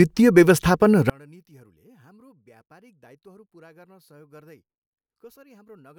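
From 1.10 s to the end, the speech drops about 34 dB to a faint remnant. The likely cause is one channel inverted, cancelling the shared centre.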